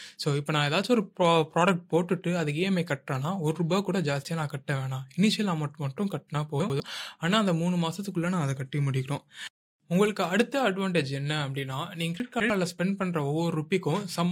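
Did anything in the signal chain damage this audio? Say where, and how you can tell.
Yes. Chunks out of order, at the buffer or network stage. At 6.6 to 6.8 s and again at 12.2 to 12.5 s the speech jumbles briefly, with hard joins. A 100 ms chunk plays late, by one chunk first, then by two. Nothing is missing, only reordered.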